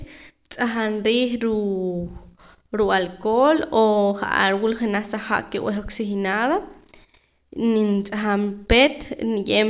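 Listening to the speech, nothing stood out as a technical fault at any point.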